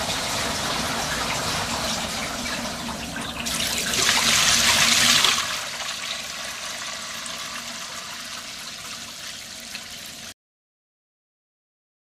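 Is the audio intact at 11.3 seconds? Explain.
No, a cut-off end begins at 10.32 s: the final buffers were never played, so the sound stops abruptly into digital silence through 11.3 s.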